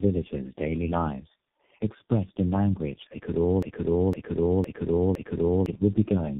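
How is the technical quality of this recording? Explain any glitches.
The quality is poor, with coding damage throughout and one stuck-playback glitch.

Tandem speech coding affects the whole clip: speech passed through three speech codecs in a row, each recoding the last one's damage, leaving it rough and warbly. The spectrogram is blank above 3.6 kHz.

From 3.63 to 5.66 s there is a broken-record loop. A 0.51 s fragment repeats four times, likely from a stalled stream. The spectrogram and waveform show identical blocks side by side.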